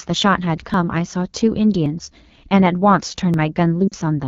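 Throughout, the speech carries the rough, raspy texture of the AMR wideband (HD Voice) codec at 8.85 kbit/s, one of its two lowest rates. Too few bits reach the pulse-driven vocal tract model, so harmonics smear and voicing turns buzzy. On a spectrogram, detailed energy stops near 6.4 kHz, with only a thin band of shaped noise from 6.4 to 7 kHz and blurred harmonic striations below.

At 0.74 s, 1.86 s and 3.34 s there are small forward jumps in the sound. This is most likely a dropped buffer (overrun): about 20 ms of audio went uncollected and was overwritten, and the surrounding pieces were butted together with no gap. The waveform shows an abrupt step discontinuity at each point, and the spectrogram shows a thin vertical broadband line there instead of a silent gap.

From 3.88 to 3.94 s, lost AMR speech frames cause the voice to drop to near silence. About 40 ms went missing, which fits two 20 ms frames. 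The decoder repeated the last good pitch and vocal tract settings at falling gain, so the sound drops to near silence within two frames before returning weak or rough. On a spectrogram, the harmonics flatten into repeated, fading copies. The waveform shows a shrinking envelope, then a soft restart.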